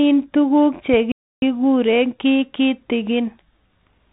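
Throughout, the speech sounds thin, scratchy and grainy, with nothing above 3.8 kHz. That is the Bluetooth CVSD headset codec's one-bit delta coding, which fits a 64 kbps link. From 1.12 to 1.42 s the speech cuts to silence for 303 ms and then resumes, a playback stall, likely from the player running short of data.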